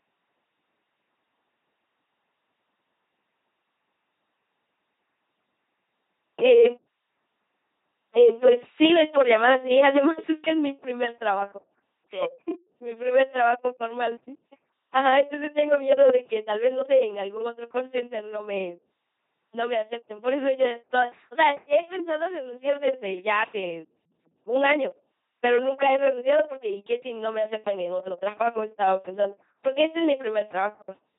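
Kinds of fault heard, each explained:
LPC-10 vocoder: speech resynthesised through a small all-pole filter driven by buzz or noise, heavily robotic throughout, nothing above 3.8 kHz, fitting 2.4 kbit/s coding.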